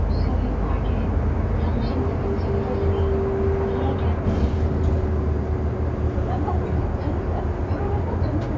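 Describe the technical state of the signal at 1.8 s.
At 1.8 s the signal is intact, with no audible fault at that moment.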